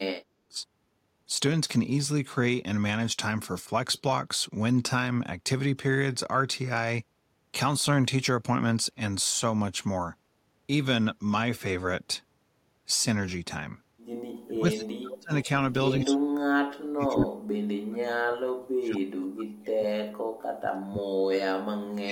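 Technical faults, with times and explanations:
0.00–0.58 s, 14.46–15.48 s, 15.98–21.16 s and 21.56–22.12 s, speech suppressed in double talk: the speech sinks by as much as about 40 dB (about 35 dB in the 14.46 s stretch), chopping out for roughly half a second at the edges and most of the long middle span. This is likely an echo canceller that, with both ends talking, mistook this talker for loudspeaker echo and attenuated everything. Unlike packet-loss dropouts, the gaps are level dips lasting from about half a second to about five seconds, not clean millisecond holes.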